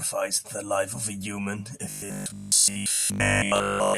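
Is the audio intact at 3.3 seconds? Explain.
No. Robotic sound from repeated short buffers covers 3.3 s, running from 1.90 s to the end at 3.98 s. The speech becomes a rigid, metallic buzz fixed at 50 Hz that still loosely tracks the words. The likely cause is audio arriving too seldom, so the software fills gaps by replaying the last 20 ms chunk over and over while the real audio is skipped. That happens for most of this stretch, and the 20 ms repeat sets the 50 Hz tone.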